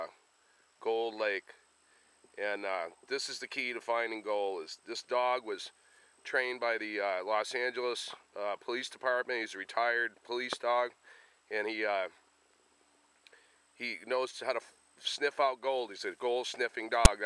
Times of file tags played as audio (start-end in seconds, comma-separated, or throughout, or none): 17.05